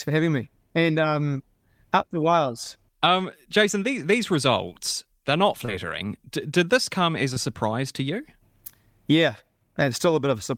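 At 5.65 to 5.70 s and again at 7.34 to 7.38 s the speech shows short concealed packet loss. In each case about 20 ms of audio arrived too late for the decoder, and the receiver covered the gap by extending the preceding sound, 24 ms and 19 ms of synthesized fill respectively, before crossfading back into the real signal. Each gap comes across as a brief smear or wobble in the speech.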